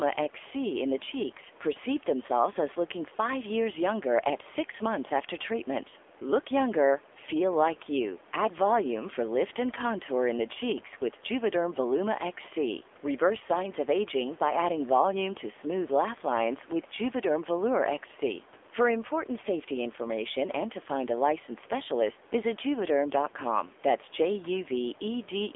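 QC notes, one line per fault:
throughout, AMR narrowband mobile codec: plainly buzzy, synthetic speech confined to 300 Hz to 3.5 kHz, from a sparse vocal-tract model, consistent with roughly 7.4 kbps.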